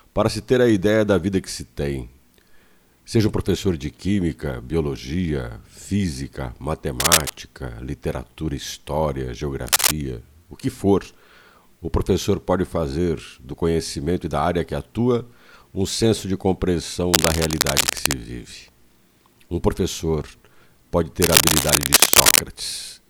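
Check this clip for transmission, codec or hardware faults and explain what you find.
Four bursts of cable scratch noise occur, at 7.00–7.30 s, 9.67–9.92 s, 17.14–18.15 s and 21.22–22.39 s. These are dense, irregular scratching and rustling bursts at roughly the level of the sound or slightly above it, likely from a worn cable or connector whose contact resistance fluctuated as it moved.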